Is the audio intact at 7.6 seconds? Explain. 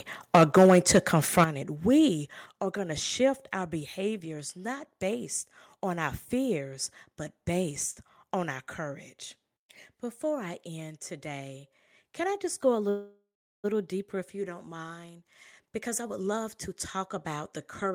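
Yes, the audio is intact at 7.6 seconds, with no fault audible at that moment.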